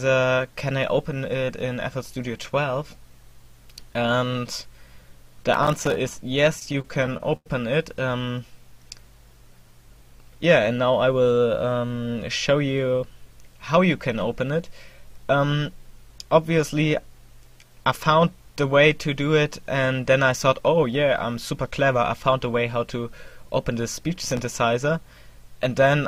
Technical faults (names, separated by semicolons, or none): processor overload crackle; repeated stalls (stutter); jitter buffer speed-up